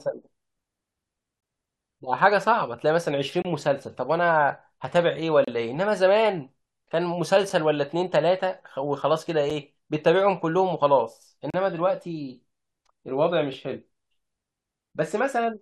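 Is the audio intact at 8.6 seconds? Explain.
Yes, the speech at 8.6 seconds plays through intact, with no dropout, click, distortion or other fault at that moment.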